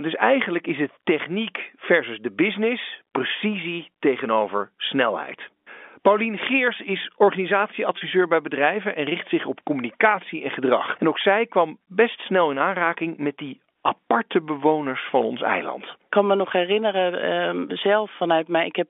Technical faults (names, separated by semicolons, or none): packet loss with pitch repetition